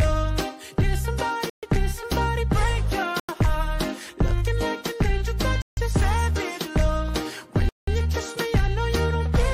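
At 1.50, 3.20, 5.62 and 7.69 s the sound drops to dead silence for 132, 90, 153 and 184 ms, then resumes. These are likely Bluetooth stalls, where delayed packets let the headphones' buffer empty. On a waveform they appear as flat gaps, and on a spectrogram as clean vertical blank bands.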